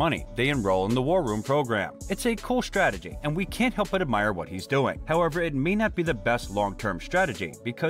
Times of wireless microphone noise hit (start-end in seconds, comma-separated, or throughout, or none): none